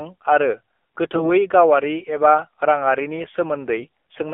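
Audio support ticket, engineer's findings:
AMR narrowband mobile codec, whole clip: band held to about 250 Hz–3.5 kHz, plainly buzzy, synthetic speech. The sound points to a low AMR-NB mode near 7.4 kbps. The damage is steady, unlike the brief bursts below.

AMR bit errors, 1.16–1.31 s, just before "गावारि एबा राङारिनि", and 3.76–3.87 s, just after it: hoarse, scratchy, gargly bursts, the first heavier, with roughly one bit in ten flipped. Pitch and level hold, so this is corrupted frame data that still passed the checksum, not packet loss or concealment.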